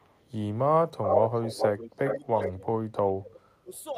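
A speech recording of about 4 seconds with two kinds of fault. The first is echo leak, heard as a delayed copy of the speech. A very faint copy trails by about 457 ms from 0.00 to 0.24 s. From 1.03 to 2.19 s a copy delayed by 400 ms is roughly as loud as the speech itself. Shorter scraps at the same delay follow from 2.41 to 2.52 s, slightly quieter, and from 3.74 to 3.79 s, very faint. The likely cause is a far end on loudspeaker whose echo canceller let its microphone pick-up return down the line. The second fault is speech suppressed in double talk, from 2.06 to 3.73 s. The talker's level dips and breaks up in pieces for around one and a half seconds in total. The deepest cuts are on the order of 35 dB. This likely comes from an echo canceller that could not tell the near talker from loudspeaker echo while both sides spoke, so it turned both down.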